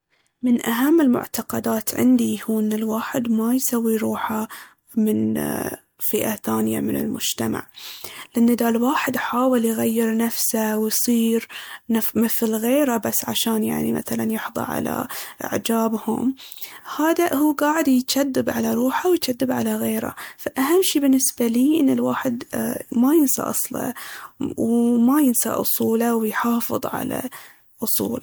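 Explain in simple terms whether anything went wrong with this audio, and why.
Generation loss runs through the whole recording, from start to finish. The speech sounds swirly and hollow, with a smeared, watery edge, and the starts of sounds are blurred rather than crisp. This was likely caused by the audio being saved as MP3, opened, and saved as MP3 again about five times over. Each save throws away slightly different detail, so the damage stacks up.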